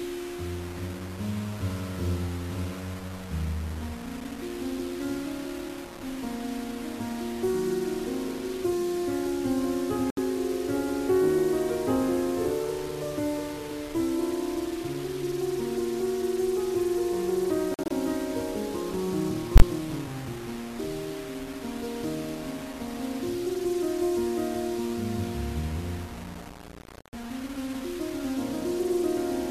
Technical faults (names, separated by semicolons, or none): low bit depth without dither; corrupt frame muted